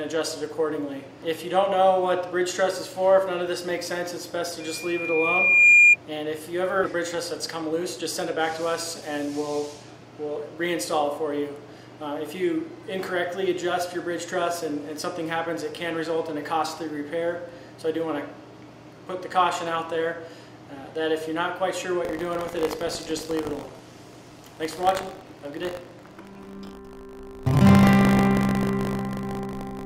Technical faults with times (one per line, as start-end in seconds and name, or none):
4.60-5.96 loudspeaker feedback squeal
6.83-6.85 skip ahead
6.95-9.02 jitter buffer speed-up
22.03-29.85 buffer tearing